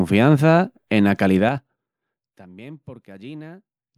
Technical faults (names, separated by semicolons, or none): zipper noise